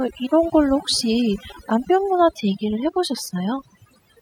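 From start to finish the speech carries overdone noise removal. A noise reducer set too strong cuts individual frequency bands near its noise estimate, taking quiet speech detail along, so the background breaks into twinkling, warbling specks, seen on a spectrogram as scattered isolated dots between gaps.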